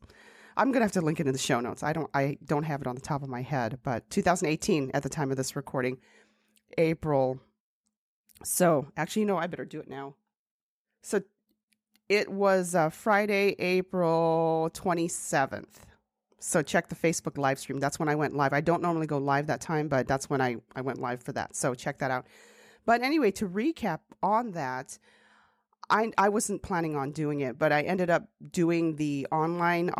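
No technical faults can be heard in the recording. The speech runs continuously, with nothing in the signal that calls for comment.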